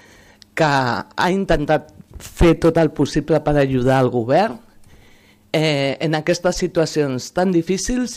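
Nothing in this audio stood out as a technical problem on listening.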